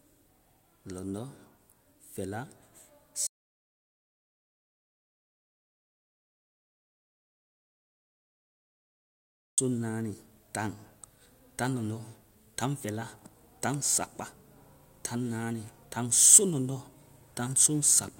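An audio dropout to silence runs from 3.27 s to 9.58 s in this speech recording, removing about 6.3 s. The sound cuts off mid-flow to silence with no room tone, most likely because the input link or device was lost while recording continued.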